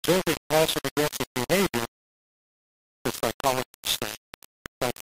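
From the first moment to the end, the speech is harsh and grainy. The distortion rises and falls with the voice itself. Quiet passages break into a rough, stepped buzz, and the softest sounds sputter or drop out. The error sits only a few decibels below the speech. This is likely low bit depth without dither. The signal seems to have been rounded to about 3 bits. With so few steps and no dither, the error tracks the waveform instead of forming a steady hiss.

At 2.18 s the sound stops dead. Silence holds until 2.92 s. Then the speech resumes at exactly the point where it stopped. Nothing is skipped or repeated. This is a rebuffering stall. The player ran out of downloaded audio and waited for more to arrive. The pause adds about 0.73 s to the clip's running time. The break is abrupt at both edges, with no fade.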